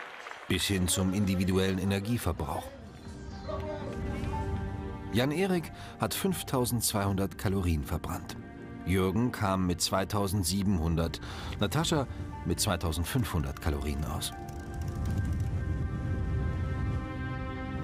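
Nothing in the audio stands out as a technical fault; there's no moment where the sound stumbles, cuts out or goes wrong.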